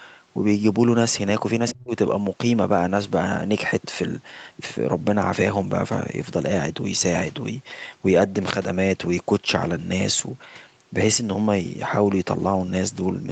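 It's a speech clip, and at 1.68 to 1.72 s there's a brief scrap of the other side's voice leaking through, sitting about 10 dB under the talker, likely loudspeaker echo the canceller didn't fully remove. Right after, from 1.72 to 1.93 s, the talker drops out by as much as 40 dB or so, which sounds like speech suppressed in double talk, likely the canceller ducking everything while both sides overlapped. Everything is band-limited to 8 kHz, as you'd expect from the Opus call path.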